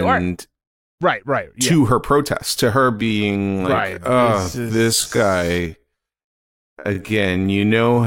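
From 2.96 s, right after "her protest to her", the pace abruptly drops to half speed and stays there to the end at 8.06 s, while the pitch doesn't fall with it. This is a time-stretched section, likely from software stretching that stretch of audio to fill a longer length and preserving pitch by repeating short fragments, which doubles the duration.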